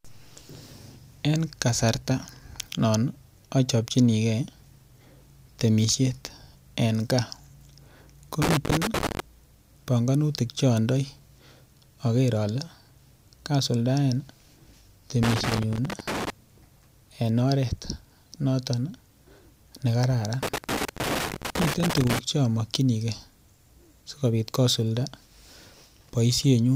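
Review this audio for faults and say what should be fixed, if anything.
Loose connector crackle breaks up the speech at 8.42–9.2 s, 15.23–16.3 s and 20.43–22.19 s: a worn contact opens and closes as it moves, chopping the signal. The waveform shows jagged dropouts and spikes, and the spectrogram shows scattered broadband vertical streaks. Reseat, clean or replace the suspect cable and connector.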